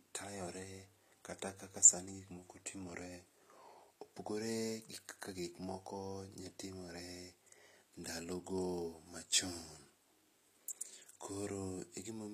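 It's a speech recording, and the whole thing carries plainly audible codec damage. The top end sounds bright enough, but it doesn't belong to the voice underneath: the sibilants come out gritty and a bit metallic, and the treble never quite lines up with the lower harmonics. That's the signature of HE-AAC compression, likely. The encoder keeps only the lower spectrum and fakes the highs by copying bands upward, which fits something like a 24 kbps stream.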